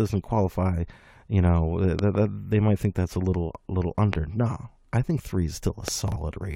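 Loud pops sit on top of the continuing speech at 1.99 to 2.17 s (two in quick succession, just before "that they might think"), at 4.13 to 4.16 s, and at 5.88 to 5.90 s, right after "I think three is". Each rises roughly 15 dB above the speech, likely from a voltage pulse off a plug, switch, static or driver glitch. They show as tall narrow spikes in the waveform and full-height vertical streaks on a spectrogram.

Chunks out of order follow at 6.08 to 6.16 s. A 40 ms chunk arrives one chunk late and plays after the audio that should come next, leaving three hard joins and a brief jumbled sound. A spectrogram shows sudden vertical breaks where the harmonics jump.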